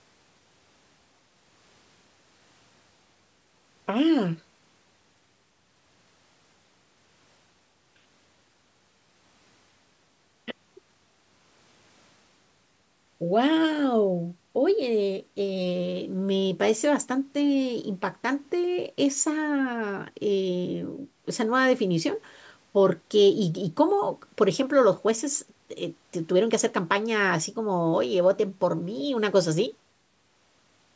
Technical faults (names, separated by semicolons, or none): none